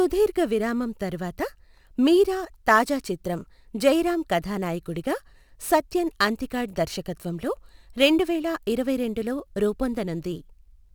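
Throughout the speech there is crude rate conversion. Samples were repeated without any filtering, which fits a change from 44.1 kHz to 48 kHz. The resulting error sits roughly 30 dB below the speech. It is heard as a gritty, inharmonic fizz on louder and brighter sounds.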